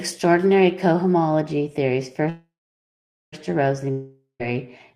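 From 1.41 s to the end, the speech goes dull and muffled. That's de-emphasis applied wrongly: a treble cut meant to undo pre-emphasis that wasn't there, or applied a second time. The top slopes away smoothly, roughly 10 dB down at 10 kHz relative to 1 kHz.

At 2.29 s the speech stalls for about 1.03 s, to 3.34 s. The last sound hangs on as a fading buzz or hiss, then about 0.84 s of near silence. It picks up exactly where it left off, so nothing's lost, just a gap pushed in. This is a call audio freeze, likely packets held up until the jitter buffer ran dry.

Then at 3.91 s there's a long network dropout, running to 4.42 s. Same fading tail, about 0.12 s of silence, but this time the speech resumes further on, with roughly 0.48 s skipped. The likely cause is audio that never arrived at all.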